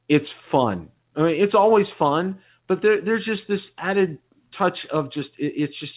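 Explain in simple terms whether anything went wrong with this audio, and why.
Nothing went wrong with this speech recording. It came through a normal call connection, so it has the narrow, telephone-like sound of a call, with nothing above about 4 kHz.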